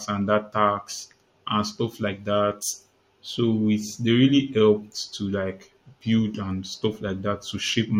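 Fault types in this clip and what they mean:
No technical faults can be heard anywhere in this speech clip. Nothing in the recording calls for a fault entry.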